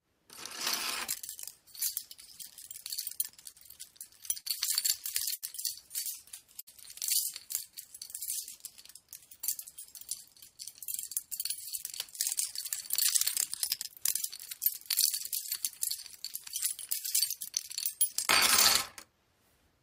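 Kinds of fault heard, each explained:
Repeated stalls (stutter): Between about 3.51 and 4.47 s the packet flow fell behind playback, so the jitter buffer emptied four times in under a second. Each time the receiver held and extended the last sound to cover the wait, roughly 96 ms of fill in total, about a tenth of that span, with the longest gap 48 ms. Nothing is lost, but the passage drags and hiccups rather than flowing evenly.
Short stall from a late packet: Twice a single packet arrived after its playout time, at 5.35 s and again at 6.60 s. The buffer ran dry and the receiver stretched the preceding sound, for 73 ms and 66 ms respectively, until the packet turned up, then resumed from the same point. No audio is missing, but each moment is held slightly too long, which can come across as a brief smear or dip.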